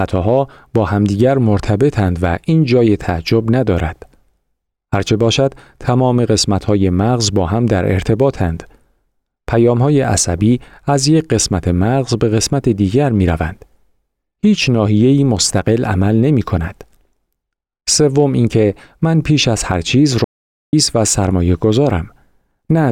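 An audio dropout to silence runs from 20.24 to 20.73 s, taking out just under half a second of the speech. The input signal was most likely lost briefly, through a disconnected device, a failed link or an accidental mute, while the recording carried on writing silence. The sound stops abruptly mid-flow and resumes just as suddenly, and the gap is dead silence with no room tone beneath it.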